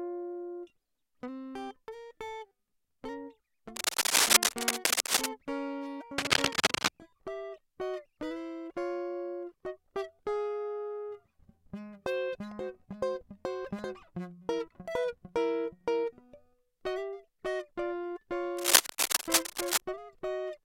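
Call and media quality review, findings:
Cable scratch noise: rough scratching bursts over the music at 3.76–5.27 s (loudest), 6.18–6.89 s and 18.57–19.81 s. Likely a worn cable or connector with jumping contact resistance.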